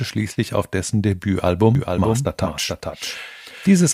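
From 1.75 s to the end, a doubled audio track is heard. A dry, full-band copy of the speech trails by roughly 400 ms, about 5 dB quieter. It starts abruptly. The likely cause is a slower second capture path.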